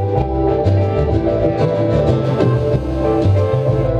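From 2.24 s to 3.85 s a GSM phone buzz sits under the sound, about 23 dB below it. A 2G handset close by is in a call, transmitting bursts at 217 times a second, and the audio circuitry rectifies those radio pulses into a hard, raspy tone at 217 Hz with a dense stack of harmonics. Unlike mains hum at 50 or 60 Hz, it is harsher and higher, and it holds steady with no relationship to the programme underneath.

At 3.85 s the continuous buzz gives way to GSM signalling bursts lasting until 3.90 s, roughly 25 dB below the sound. The phone is still in the call, but with its user silent it transmits only short groups of bursts, so the rectified interference arrives as brief, even ticks. The broken, rhythmic pattern is what separates it from the unbroken buzz just before.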